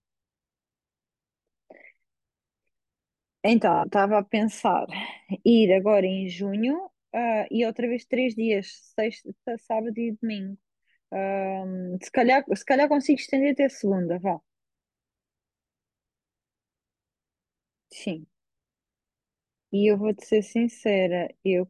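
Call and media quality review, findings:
No call or media quality findings to report for this speech clip.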